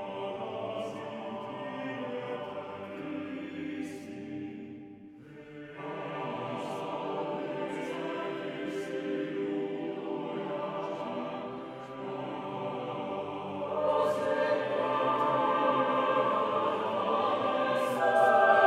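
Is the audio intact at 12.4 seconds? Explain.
Yes, at 12.4 seconds the audio plays through cleanly, with no dropout, click, distortion or other fault to be heard at that moment.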